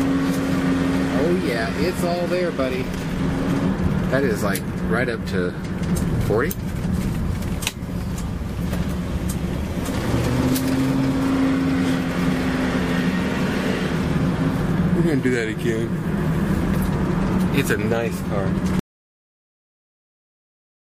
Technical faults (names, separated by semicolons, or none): audio dropout to silence